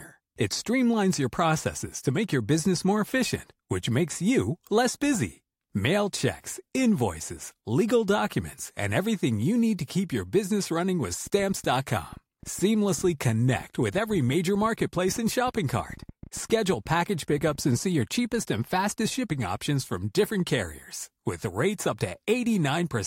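From 11.27 to 17.6 s there's a train of clicks over the speech, around 10 a second at an uneven pace, roughly seventy in all, peaking about as loud as the voice. It's likely interference from nearby gear or a faulty connection or power supply.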